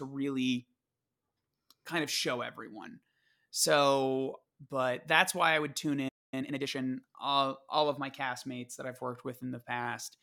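At 6.08 s, right after "why I would tune", a playback stall silences the speech for about a quarter second, likely because the player ran out of buffered data. The waveform shows a flat gap.

From 6.34 to 6.8 s, time-compressed catch-up hurries the speech to about 1.5 times normal speed at normal pitch, before "all all of my". On the spectrogram, syllables crowd closer together while the harmonics stay at the same height.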